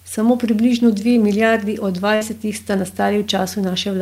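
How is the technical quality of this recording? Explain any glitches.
One glitch stands out in this speech clip. At 2.15 to 2.23 s, just after "približno dve milijardi od", a burst of packet loss drops about 60 ms of audio. The receiver extends the last sound for 56 ms while fading it, giving a brief held sound before the speech jumps ahead. On a spectrogram the last spectrum freezes into flat, dimming bands, then cuts off abruptly.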